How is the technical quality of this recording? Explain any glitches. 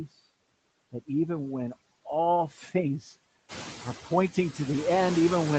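The recording has two audible glitches, both caused by the noise suppressor in the call chain.

Noise suppressor artifacts run through the whole clip. The suppressor sorts the signal, frame by frame, into bands it judges to be steady noise and pulls those down by about 20 dB. The background therefore dips in the gaps between phrases and rises again under the speech. After about 3.5 s the room noise rises by about 13 dB and the suppressor works harder against it.

Speech cut by the noise suppressor occurs from 2.51 to 2.71 s, right after "that even when all". The suppressor mistook part of the speech for noise and turned it down along with the background, by as much as about 11 dB. Over roughly a sixth of a second the sound fades and seems swallowed, as if a soft consonant or word ending were dropping out.

The band stops at 8 kHz, which is consistent with an Opus call path at around 32 kbps.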